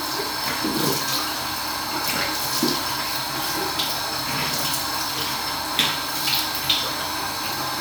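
Nothing stood out on listening to these sounds.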